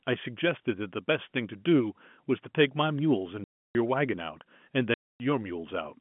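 Speech over a telephone-band line, with 150 Hz to 3.4 kHz G.711 A-law coding, broken by two abrupt dead gaps with hard edges, from 3.44 to 3.75 s (0.31 s) and from 4.94 to 5.2 s (0.26 s). This is packet loss filled with silence: the receiver played nothing where packets were missing, and both gap lengths fit 10 ms packets.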